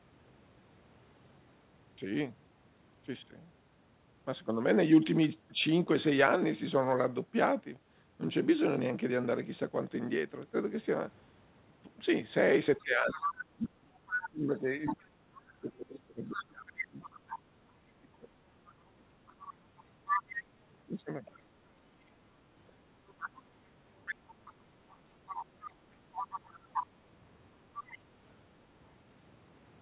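An echo canceller that likely failed to remove the far end's loudspeaker sound lets the other side's voice leak through from 12.79 to 15.03 s, then again at 16.26 to 17.38, 18.69 to 21.43, 23.08 to 26.86 and 27.78 to 27.98 s. Over the 4 kHz-limited G.711 band it sits from only slightly to well below the main talker, as a second voice.

From 12.84 to 20.25 s, and briefly at 27.87 to 28.1 s, the canceller likely could not tell the talker from the echo during double talk and turned both down. The speech is suppressed in double talk, dipping in pieces by up to some 30 dB for around five seconds in total.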